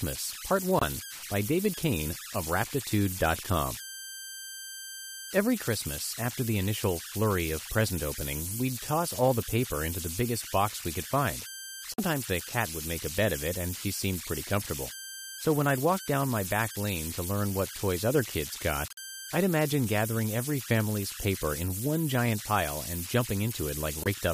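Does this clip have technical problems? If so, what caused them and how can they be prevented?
Yes. Converter idle tones run throughout: a whistle around 1.5 kHz sits about 10 dB below the speech, grainy under quiet passages. An undithered delta-sigma converter falls into repeating bit patterns at low input levels. Adding dither at the converter prevents it.

Corrupt frame muted occurs four times, as abrupt silent holes at 0.79–0.85 s, 11.94–12.00 s (between "box we could find" and "the cat would make"), 18.88–18.99 s (between "toys other kids got" and "I'd imagine gathering every"), and 24.03–24.07 s. Each gap's length suggests two to four damaged frames that the decoder rejected and the player replaced with silence. Error protection on the stream, or concealment in place of muting, prevents this.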